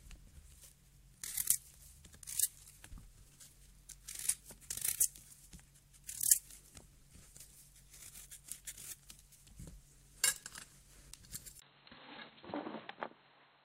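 At 11.6 s, after a 20 ms silence, the sound turns dull and boxy, with nothing above 4.2 kHz, a little quieter, and a faint new noise floor, likely an input switched to a poorer device. Simple filtering wouldn't shift level and noise together with a gap.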